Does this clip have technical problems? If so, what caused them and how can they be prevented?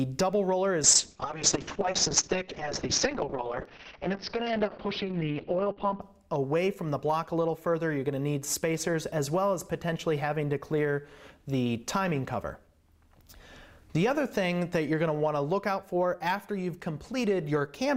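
Yes, there's a call bitrate drop from about 0.85 s to 6.07 s. The bandwidth estimate collapsed, so the encoder had to squeeze everything into very few bits, and the sound goes rough and watery with the top end cut from around 20 kHz down to 6 kHz, which fits a fall from something like 96 kbps to roughly 6 kbps. It sits at that floor for about 5.2 s before recovering. To prevent it, give the call a steadier network path and set a sensible minimum bitrate on the encoder.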